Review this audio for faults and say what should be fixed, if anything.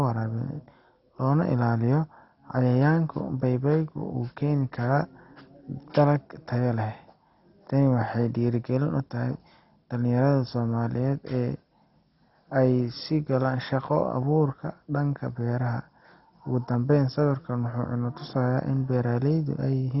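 Heavy MP2 compression is the likely cause of the dull, gurgling speech throughout. Starved of bits, upper sub-bands switch off, leaving nothing above 5.6 kHz, consistent with a bitrate near 32 kbps. Encode at a much higher bitrate, or with a more efficient codec, from the original source.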